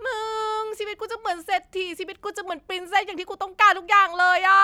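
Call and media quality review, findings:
No defects detected in the speech signal; level, continuity and timing hold steady across the whole recording with no dropouts, discontinuities or level anomalies to log.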